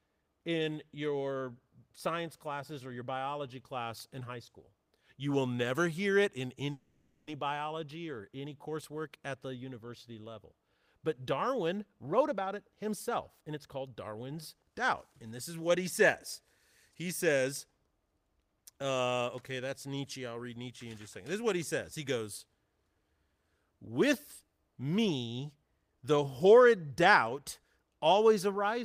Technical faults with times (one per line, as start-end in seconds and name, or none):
6.71-7.28 call audio freeze
11.93-16.41 jitter buffer speed-up